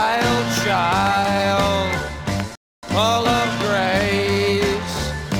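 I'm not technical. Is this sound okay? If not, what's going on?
No. At 2.55 seconds there is a rebuffering stall: the player used up all the audio it had downloaded and had to wait for more to arrive before it could continue. You hear the sound stop dead into silence, then pick up at 2.83 seconds exactly where it left off. Nothing is skipped or missing; the pause just adds roughly a quarter of a second (about 0.28 s) to the playback.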